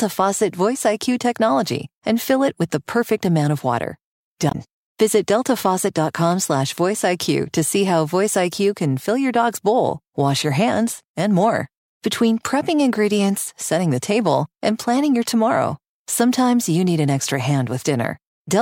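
At 4.48 to 4.55 s, damaged data in a compressed stream makes a brief glitch as the decoder loses sync.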